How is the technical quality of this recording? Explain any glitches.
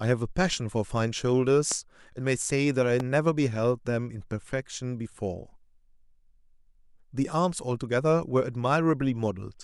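Two loud pops interrupt the speech, at 1.72 to 1.74 s and 3.00 to 3.02 s. Each is a single sharp thump, roughly 10 dB above the speech, which continues underneath. The likely cause is an electrical transient, such as a switch or static discharge, injecting a voltage step into the signal. On the waveform, each appears as a tall spike, and on the spectrogram as a thin vertical broadband stripe.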